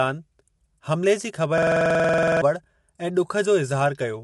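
From the start and throughout, the speech is rough and grainy, with noise filling the gaps between harmonics. This is likely low-delay AAC compression (AAC-ELD) at a low bitrate, near 32 kbps. A spectrogram shows smeared harmonics and a hard ceiling at 11.5 kHz, with nothing above it.

From 1.58 s to 2.42 s, a system hang loop replaces the sound. The hardware kept replaying one 46.44 ms slice, which fits a 2048-sample buffer, 18 times at 21.5 Hz. It is heard as one short piece repeating rapidly, and roughly 0.7 s of audio is lost. The waveform shows identical repeating blocks.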